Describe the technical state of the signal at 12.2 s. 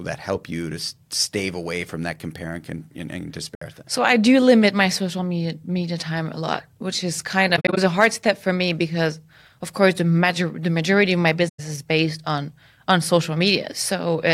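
At 12.2 s the speech signal is intact, with no audible fault at that moment.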